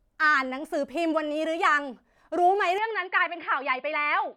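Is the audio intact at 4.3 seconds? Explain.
No. From 2.78 s through to the end, the speech has gone dull and boxy, with nothing above 5 kHz, so 4.3 s falls right inside that stretch. It sounds like the input switched to a poorer device, most likely a fallback mic or a headset's call profile that passes a narrower band. The change is seamless, with no gap and about the same level, but there's a faint new noise floor sitting well below the speech.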